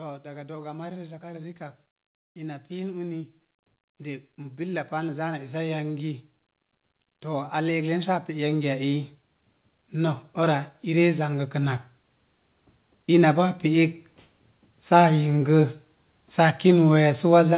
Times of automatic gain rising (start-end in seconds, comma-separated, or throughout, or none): 0.22-11.82, 13.08-16.96